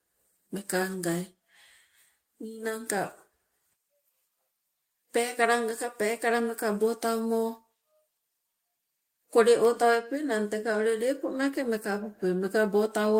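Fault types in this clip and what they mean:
The speech signal shows no audible technical faults at any point.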